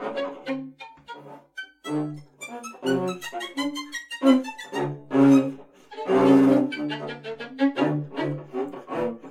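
At 2.13 to 2.16 s, damaged data in the compressed stream makes the decoder misread frames and lose sync, producing a brief glitch.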